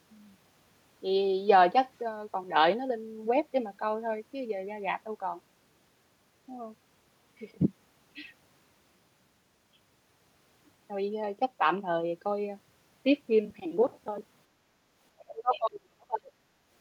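Background gated by the echo canceller at 14.55 to 14.63 s: the canceller pulled the microphone down while the loudspeaker played, so room sound dips about 6 dB briefly.

Speech suppressed in double talk from 15.24 to 16.34 s: the speech drops deeply, by some 35 dB, over roughly a second, likely because the canceller muted both talkers at once.

Other side's voice leaking through at 15.54 to 15.7 s: a faint second voice, around 20 dB below the speech, likely loudspeaker echo the canceller failed to remove.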